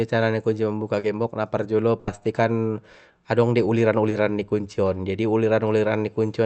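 At 0.99 to 1.05 s comes a short concealed packet loss: about 40 ms of the speech never reached the decoder in time, and the receiver invented a stand-in by extending the preceding sound before crossfading back into real audio. It is heard as a brief smear or wobble. On a spectrogram, the harmonics or noise texture run on unchanged for that stretch, and the waveform shows a suspiciously uniform, repeating shape.

From 1.99 to 2.09 s there is a burst of packet loss, roughly 80 ms missing in a row. Concealment carries the last sound forward and turns it down as the gap lengthens, so it becomes a held buzz or fading hiss, and the speech then resumes further along with the lost part gone. A spectrogram shows a frozen, decaying band with an abrupt jump where real audio returns. The waveform envelope sags, then steps back up.

At 4.09 to 4.13 s a second short concealed packet loss fills about 20 ms. 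It is briefer, a shorter smear or wobble, and appears as a narrow smoothed seam in the spectrogram. All of this sits inside an Opus call path whose audio stops at about 8 kHz, visible as a flat ceiling across the spectrogram.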